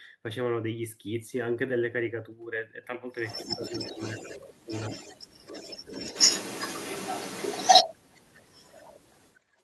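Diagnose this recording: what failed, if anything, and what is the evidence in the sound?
A delayed copy of the speech trails the talker by about 155 to 160 ms: about 10 dB below the speech at 3.27–4.39 s, roughly as loud as the speech itself at 4.69–7.94 s, then much weaker at 8.11–8.45 s and 8.65–9.63 s. This points to an echo leak in call processing, likely a far-end loudspeaker echo that its canceller failed to remove.

The talker's speech dips in pieces while the other side is active, by roughly 10 dB at 3.42–4.0 s and by a deeper 20 dB or so at 4.21–4.71 s. This is speech suppressed in double talk, likely an echo canceller treating overlapping speech as echo and turning both down.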